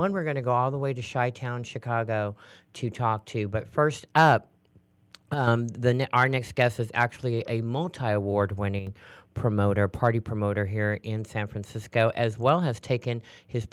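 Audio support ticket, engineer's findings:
Speech level dips abruptly by about 6 dB at 5.34 to 5.47 s, just before "the our next guest", and at 8.79 to 8.87 s, between "actually a multi award" and "promoter party promoter here". Likely one channel drops out: the mono sum loses half its shared content.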